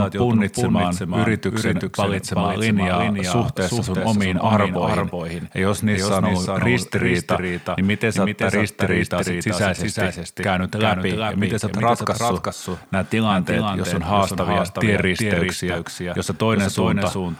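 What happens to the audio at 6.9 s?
At 6.9 s the speech carries a doubled audio track. It is not confined to that moment; it runs through the whole clip. A second full-band copy of the speech trails the original by roughly 400 ms, at about 5 dB lower. The copy has no decay or room colour. It sounds like a clean, quieter repeat chasing each syllable. The likely cause is the audio being captured twice, once through a slower path.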